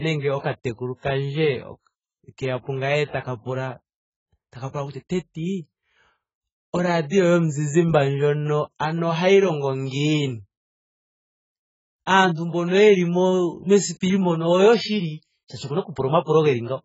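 Heavy lossy coding runs through the whole recording, most likely AAC compression at a very low bitrate, around 12 kbps, which suits AAC-LC. Starved of bits, the encoder discards everything above about 7.7 kHz and coarsely quantises what remains, leaving gaps across the spectrum. The speech therefore sounds dull and smeared throughout, with a watery, warbling texture on sustained vowels and a fizzy, swirling edge on sibilants.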